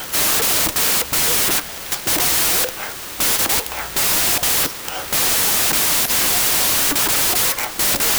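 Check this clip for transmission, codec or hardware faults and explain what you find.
One fault runs through the whole recording. Wrong sample width: loud hiss swamps the speech, which is 1.5 times too fast and high-pitched, because 16-bit samples are read as packed 24-bit, splicing mismatched bytes together.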